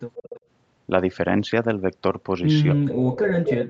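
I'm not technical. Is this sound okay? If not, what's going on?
No. Two problems can be heard.

The first is an echo leak. From 0.16 to 0.40 s a faint, delayed copy of the voice trails about a quarter of a second behind it, and from 3.25 to 3.52 s it returns, this time almost as loud as the voice itself. This is likely because the far end played the call through a loudspeaker and its echo canceller failed to remove everything its microphone picked up, so part of the sound was sent back.

The second is speech suppressed in double talk. From 2.72 s to the end, the voice sinks and drops out in pieces, at its worst almost disappearing. This likely happened because both ends were talking at once, and the echo canceller could not tell the local voice apart from the returning echo, so it turned both down.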